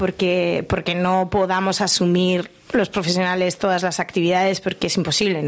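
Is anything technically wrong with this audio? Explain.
Yes. Throughout, the gain swings by about 10 dB, pulling loud and soft parts closer in level so the sound is squashed. This is gain pumping, likely from overdriven input gain triggering a fast limiter.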